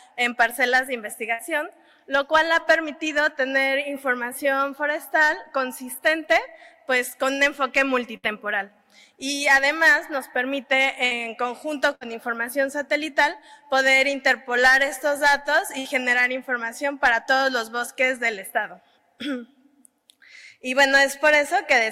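At 1.33 to 1.42 s, 8.17 to 8.26 s, 11.05 to 11.14 s, 11.95 to 12.04 s and 15.79 to 15.88 s, a burst of packet loss breaks the audio. Each time, a run of data never arrived in time. The receiver stretched the last sound over the hole, about 54 to 62 ms, fading it down. That fill is heard as a brief buzz or hiss. Then the audio jumps ahead, with about 60 ms gone.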